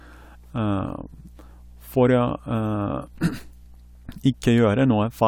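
Speech, with mains hum running under it the whole way through: a steady 60 Hz drone sitting roughly 25 dB below the voice level. That's the power line leaking into the signal, most plausibly through a ground loop or a transformer parked too close to the gear.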